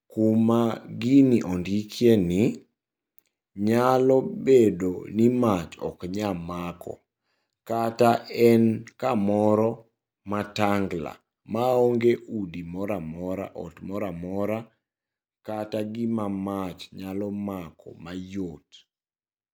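At 12.16 s a sudden gain jump drops the speech and its background noise together by about 6 dB for the rest of the clip, likely from a gain setting applied without a ramp. The waveform shows an abrupt step down in amplitude, and the spectrogram darkens evenly across all frequencies at that instant.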